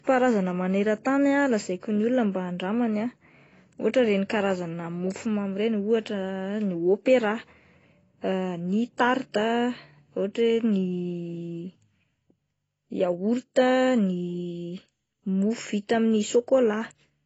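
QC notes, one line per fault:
Throughout, AAC compression: speech sounds dull and smeared with fizzy sibilants and nothing above 8 kHz, likely a starved AAC-LC encode around 24 kbps.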